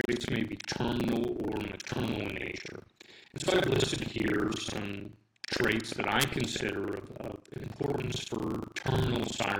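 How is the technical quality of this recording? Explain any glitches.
The quality is poor: a steady robotic buzz at 25 Hz runs through the whole recording whenever sound is present. That is buffer tearing. The writing program and the playback hardware have drifted so they cross mid-buffer, leaving most of each buffer filled with audio from around 70 ms earlier, joined abruptly on both sides.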